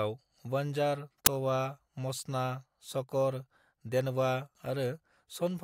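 At 1.26 s there is a single hard-edged burst of static, just before "तवा मचना". It is a case of file tags played as audio. A block of embedded data, here a compressed cover picture, has been read by the player as if it were sound samples. Because compressed picture data is close to random, it comes out as very loud white noise. The burst is very short, under a hundredth of a second. It starts and stops abruptly, like a sharp crack.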